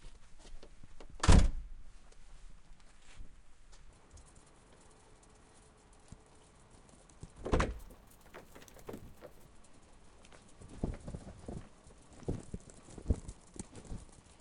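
From 7.74 to 9.46 s, imaging from sample-and-hold upsampling: the sound was raised from 22 kHz to 48 kHz by repeating samples without smoothing, leaving a mirrored copy between 11 kHz and 22 kHz at about 19 dB below the signal. It is heard as a metallic fizz that rises and falls with the sound, and that tracking, with the copy sitting above the original band rather than folding down into it, sets it apart from aliasing.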